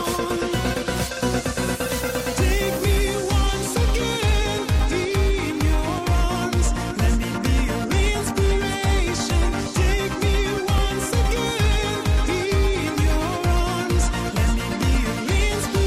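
At 4.80 s and again at 10.78 s, an overlap between stream segments causes the player to trim timestamp overlap from audio that was never duplicated. About 18 ms and 10 ms vanish and the waveform jumps, heard as a tiny skip; the six-second spacing fits 6-second segments.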